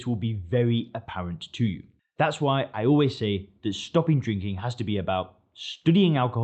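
No technical faults can be heard in this recording.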